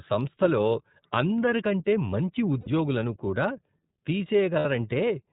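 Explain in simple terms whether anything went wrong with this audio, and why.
Yes, two things went wrong. The whole recording has passed through the iLBC codec, a phone-call voice compressor. It strips everything above 4 kHz and rebuilds the speech from rough approximations, so it sounds dull and slightly synthetic throughout. Unlike ordinary muffling, it adds that buzzy, artificial texture.

There are also lost iLBC frames: brief dropouts where pieces of the transmission never arrived. They occur at 0.72 s (about 30 ms, just before "అందరికంటే మంచి"), at 2.61 s (about 60 ms, just after "సంస్థలో అందరికంటే మంచి"), and at 4.59 s (about 60 ms). Instead of silence or a click, the decoder repeats the last bit of voice, so each gap sounds like a short, held buzzy vowel. The normal voice then returns almost immediately.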